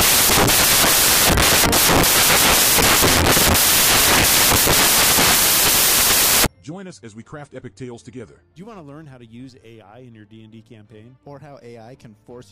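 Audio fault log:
0.00 to 6.46 s, samples built from the wrong bytes: the reader's stitching each sample together off by a byte or in swapped order, so the jittery low bits end up on top. You get loud, harsh noise there, close to white on the louder sounds.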